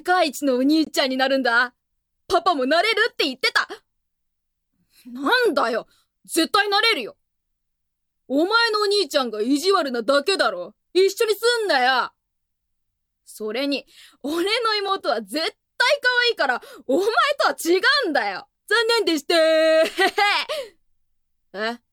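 Gaps between stream segments interrupt the audio at 0.85 to 0.87 s, a hard-edged silence of about 20 ms, and again at 14.88 s for about 3 ms. The time stamps of adjacent 2-second segments fail to meet, so the player fills each hole with silence. No audio is lost.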